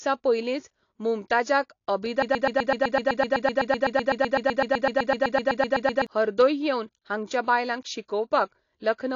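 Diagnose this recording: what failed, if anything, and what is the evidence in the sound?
Codec stage: likely AAC compression. Nothing survives above 7.1 kHz, and the speech sounds smeared and warbly, not just dull like a clean low-pass. This fits roughly 38 kbps AAC-LC.

Playback or stream stage: a broken-record loop after "पयलींच मुमताजाक", from 2.22 to 6.07 s. A 126 ms fragment repeats 30 times, identically and without decay, unlike an echo. The stall likely discarded the intervening audio.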